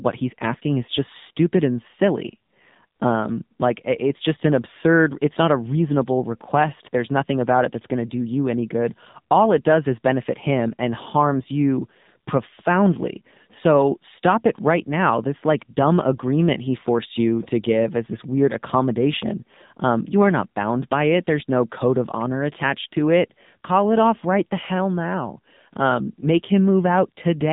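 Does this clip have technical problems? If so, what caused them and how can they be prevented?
Yes. Throughout the speech, AMR narrowband mobile codec damage is plainly audible: nothing above 3.8 kHz survives, and the voice sounds buzzy and synthetic, which fits a low AMR-NB mode near 7.4 kbps. Unlike simple band-limiting, it adds pulse-driven synthetic coloration, not just dullness. Prevent it by recording locally or using a wideband, higher-bitrate path.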